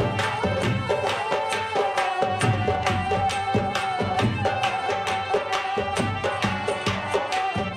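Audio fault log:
No technical faults can be heard anywhere in the audio; there is no audible disturbance.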